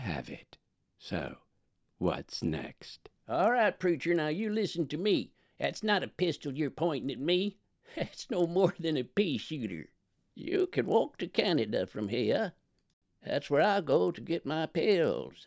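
Throughout the clip, the resampler restarted on every block. Each 40 ms block was converted from 24 kHz to 16 kHz in isolation, leaving a small error at every block edge. The result is a steady 25 Hz ticking buzz that rides on the signal and drops away in silence.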